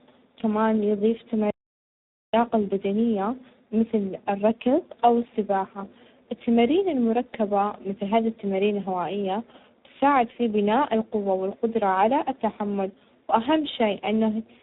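Throughout, tandem speech coding makes the speech rough, muffled and warbly. It sounds coded twice in succession, each pass degrading the last, with nothing above 3.8 kHz.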